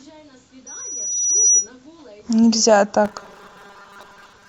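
A speech clip with robotic sound from repeated short buffers. From 3.05 s to the end, the voice becomes a rigid, metallic buzz fixed at 200 Hz. This is likely a 5 ms chunk repeated when audio arrives too late, with about half the audio skipped.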